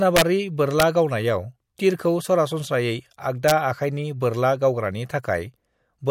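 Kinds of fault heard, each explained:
Integer overflow: loud speech peaks exceed the integer limit and wrap to the opposite sign, giving harsh cracks near 0.16–0.22 s, 0.80 s before "गावनायाव तीरखौ सरासनस्रायै", and 3.48–3.52 s.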